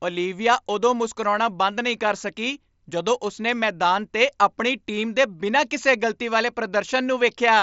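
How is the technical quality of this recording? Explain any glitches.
Nothing stood out on listening to this speech recording, which comes through a Bluetooth mSBC headset link, and there are no glitches to explain.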